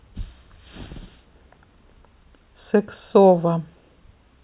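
Nothing in this speech clip stands out as a technical fault, so there's nothing here that needs a closer listen.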